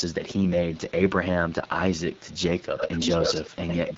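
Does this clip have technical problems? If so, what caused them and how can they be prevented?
Yes. The speech passed through the AMR wideband (HD Voice) codec at 8.85 kbit/s, one of its two lowest rates. At that rate, the pulse-driven vocal tract model has too few bits to describe each speech frame accurately, so the audio throughout sounds rough and raspy with plainly audible coding damage. Nothing is present above 7.6 kHz. To prevent it, keep the link at 12.65 kbit/s or higher so the codec stays in its clear range.

An echo leak is also audible, likely from a far end using a loudspeaker whose echo canceller let part of the returned signal through. A delayed copy of the speech, about 135 ms behind and roughly 30 dB down, appears faintly at 0.1–0.15 s, 0.43–0.52 s, 0.7–0.92 s, 1.08–1.19 s and 1.99–2.38 s. From 2.58 to 3.95 s, the echo arrives 85 ms late at about the same level as the speech. 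To prevent it, use a headset at that end or tune its echo canceller to converge and track reliably.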